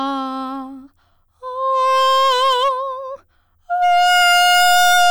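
Music with hard clipping from about 1.71 to 2.69 s, overdriven by about 8 dB, then from 3.82 s to the end, about 22 dB over, where flattened peaks become harsh fuzz.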